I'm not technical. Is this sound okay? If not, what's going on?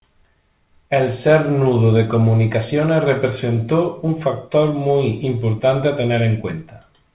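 Yes, it's fine: this is speech that came through an ordinary internet call, and the muffled, phone-like sound is simply how that kind of call line carries audio, with nothing above 4 kHz, rather than anything going wrong.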